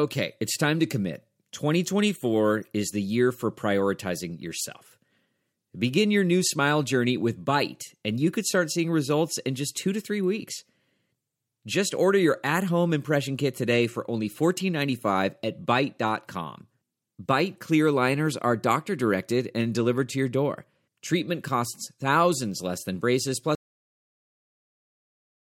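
A speech recording with a cut-off end: at 23.55 s the sound stops mid-utterance because the final buffers were never written, leaving digital silence to the end. On a waveform the signal ends abruptly with no decay; a spectrogram shows energy vanishing at one vertical edge.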